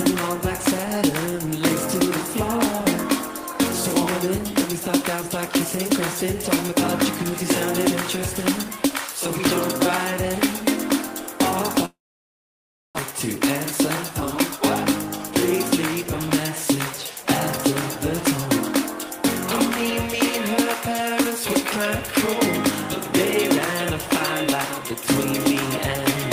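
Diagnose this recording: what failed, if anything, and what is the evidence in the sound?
The sound breaks off at 11.85 s and returns at 13.01 s. The first instant of the gap carries a fading smeared continuation of the last sound, then roughly a second of near silence. About a second of material never returns, and the timing afterwards is shifted by about a tenth of a second. On a spectrogram this shows as a decaying tail into a blank band. The likely cause is a long network dropout, with the receiver concealing and then giving up until packets resumed.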